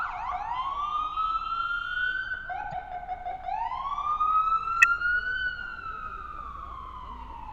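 A short, faint blip at 2.72–2.74 s, then a much louder burst at 4.82–4.84 s: a corrupt frame decoded each time, with damaged bits spraying energy at wrong frequencies for a frame or two.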